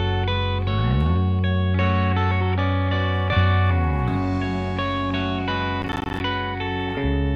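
From 5.82 to 6.20 s the music breaks into processor overload crackle, the processor repeatedly misses deadlines for buffers of around 10 ms, leaving a rapid run of hard-edged silent gaps. Unlike one dropout, it sounds like gritty tearing that stops when the load eases.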